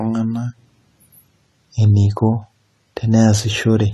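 From start to end, the speech has a hard ceiling at 13 kHz, with nothing above it. Sibilants sound fizzy and smeared, and sustained sounds warble. This is likely AAC compression, with a lowered cut-off and thinly coded bands that point to around 32 kbps.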